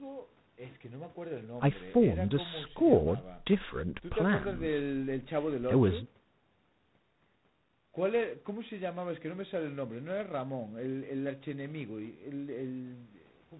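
From start to finish the speech carries G.726 ADPCM damage at 24 kbit/s, below the 32 kbit/s DECT rate. Too few bits per predicted difference leave a harsh, rasping hiss that rises and falls with the speech, unlike the steady background hiss of noise, and nothing passes above 4 kHz.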